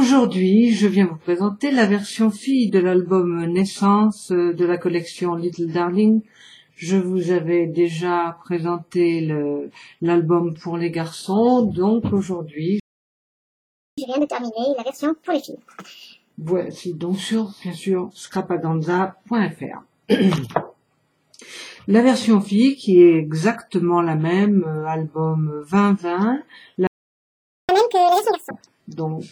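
At 12.80 s the sound stops dead for about 1.18 s. This is a playback stall. The player likely ran out of data or had its thread blocked. Output stays silent until 13.98 s. A second stall runs from 26.87 s to 27.69 s, about 0.82 s.

After each gap comes catch-up at higher speed. The player resamples its backlog to win back lost time. From 13.98 s to 16.33 s it runs at 1.5 times speed, pitched up about seven semitones. From 27.69 s to 28.51 s it runs at double speed, roughly ten semitones higher.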